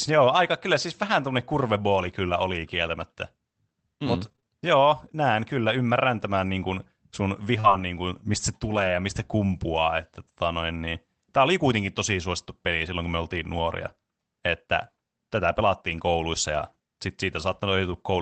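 From 4.25 to 4.51 s, repeated packet loss leaves four short holes, the longest 23 ms, each patched by extending prior sound: choppy, robotic texture. At 7.60–7.66 s, a short concealed packet loss smears about 40 ms, producing a brief wobble. Immediately after, 7.64–7.82 s, lost packets rebuilt from error correction play low-bitrate copies, rougher and noisier for about 100 ms, consistent with 20 ms frames. The same reconstruction recurs at 8.64–8.94 s, spanning about 160 ms, and once at 9.52 s, briefly grainy.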